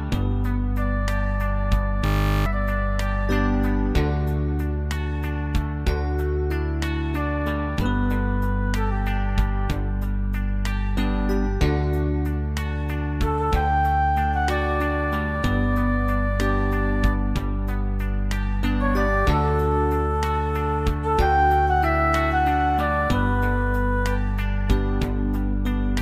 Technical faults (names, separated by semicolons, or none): system hang loop